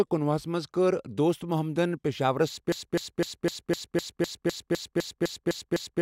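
Speech that runs normally until 2.72 s, where it locks into a broken-record loop: a 253 ms fragment repeats exactly, back to back, about 13 times through to the end. The likely cause is a stalled player or stream resending its last buffer. A spectrogram shows identical blocks tiling at that period, and the waveform shows the same shape repeating.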